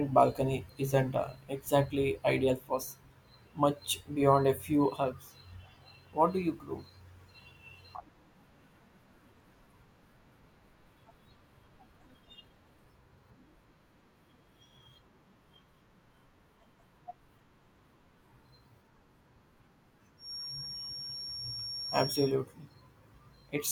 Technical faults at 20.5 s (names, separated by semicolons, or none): feedback whistle